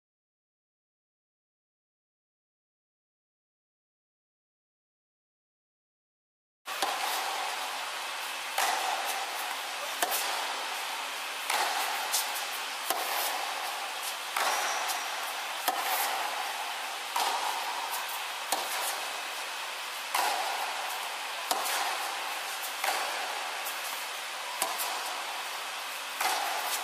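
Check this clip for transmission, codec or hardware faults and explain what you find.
One codec fault is present. At 6.67 s, compressed frames skipped: a few frames were missing or refused by the decoder, so the sound jumps ahead roughly a tenth of a second.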